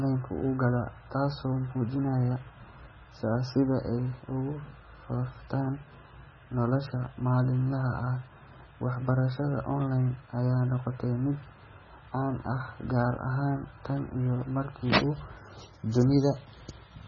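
From start to finish the speech sounds heavily processed, and the likely culprit is MP3 compression at a very low rate, the kind you'd get around 16 kbps. Everything above about 6.9 kHz is simply gone, so the top end sounds dull. The bigger giveaway is the watery, swirly texture: quiet frequency detail keeps dropping in and out from frame to frame, so s sounds turn into metallic chirps and consonant onsets come out smeared.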